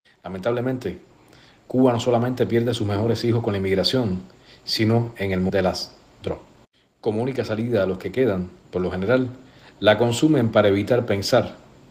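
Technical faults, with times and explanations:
5.49 s, skip ahead: the sound lurches forward with no gap, and about 0.7 s of material is simply missing, the two sides butted together. A stretch of audio was dropped, in transit or by an overflowing jitter buffer, so playback could jump straight to later audio already waiting.
6.12–8.76 s, jitter buffer speed-up: the sound runs noticeably hurried at unchanged pitch, about 112% of normal speed. The receiver was holding more audio than it wanted and trimmed many short pitch-period slices, shedding roughly a third of a second.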